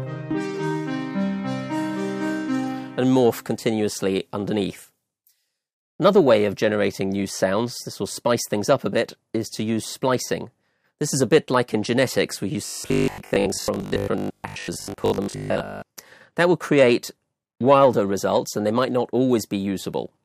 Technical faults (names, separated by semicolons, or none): robotic sound from repeated short buffers